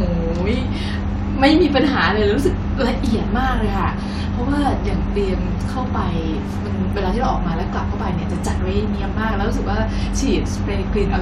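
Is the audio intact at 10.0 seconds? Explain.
Yes, the speech at 10.0 seconds plays through intact, with no dropout, click, distortion or other fault at that moment.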